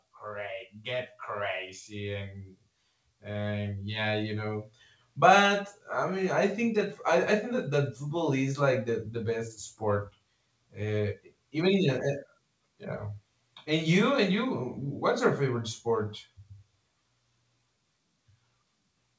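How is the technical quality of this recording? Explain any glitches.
The recording has one glitch near the start, heard through a call path that fits G.722 coding at 64 kbps, with nothing above 8 kHz.

From 0.21 to 4.71 s there is an automatic gain rise. The gain control judged the input too quiet and lifted it by about 13 dB, so voice and background swell together. On a waveform the envelope widens steadily, and on a spectrogram everything brightens evenly below the 8 kHz ceiling.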